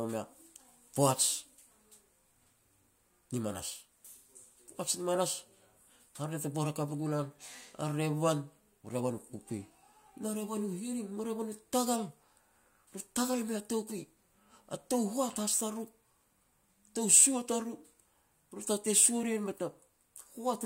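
No technical faults can be heard anywhere in this speech recording.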